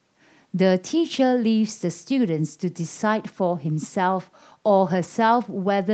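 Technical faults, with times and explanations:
The speech carries the ordinary marks of a call microphone and a wideband call connection, with nothing above 8 kHz, which fits a codec such as Opus at around 32 kbps, and no technical faults can be heard.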